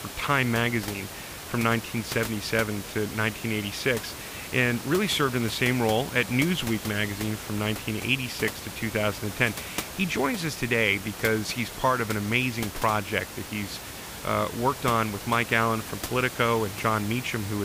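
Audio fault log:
No faults detected.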